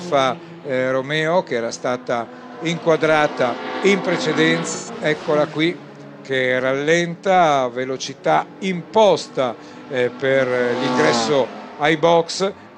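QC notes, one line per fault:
4.74–4.90 s, AAC frame loss with concealment: a short stretch of the sound turns smeared and noisy, with a hollow, phasey colour, before the normal signal resumes. About 128 ms of encoded audio went missing, which fits roughly three AAC frames. The decoder covered the gap by rebuilding each lost frame from the last good spectrum, with scrambled signs or interpolated energy. The loss is too brief to decay into silence.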